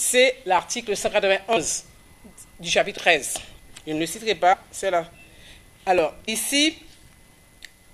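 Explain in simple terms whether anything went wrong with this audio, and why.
Two separate problems can be heard.

The first is a steady ticking. From 0.59 s to 7.79 s there is a click about every 0.95 s, roughly ten in all. This sounds like clock drift buffer slips, and the likely cause is two devices each keeping their own time. One runs slightly fast. The gap between them slowly builds up or drains away. Then a handful of samples gets dropped or repeated, which makes the click.

The second is compressed frames skipped. At 1.56 s, 4.52 to 4.54 s, and 6.27 s, the sound jumps forward. Each jump loses about a tenth of a second. Those chunks of the compressed file were missing or damaged, so the player left them out.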